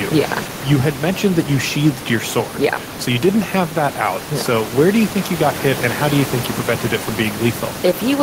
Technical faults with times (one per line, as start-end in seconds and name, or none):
none